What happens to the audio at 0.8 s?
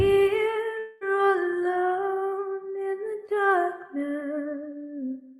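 At 0.79 s the stream likely suffers a long network dropout: packets stop arriving until 1.03 s, and about 0.22 s of audio is never delivered. The receiver covers almost the whole gap, roughly 215 ms, by stretching the last sound it had into a fading buzzy hiss, with no stretch of dead silence. When the audio returns at 1.03 s, it picks up further along, and the missing portion is simply gone.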